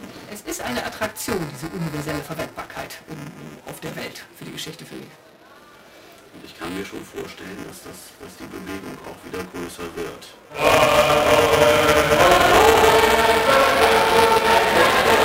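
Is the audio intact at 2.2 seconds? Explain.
No. Buffer tearing runs through the whole clip, including 2.2 s: writer and reader cross inside each period, so about a tenth of every buffer replays audio a few milliseconds old. The result is a steady 375 Hz rattle, fitting a 128-sample buffer, present only while sound plays, with no silent gaps as in dropouts.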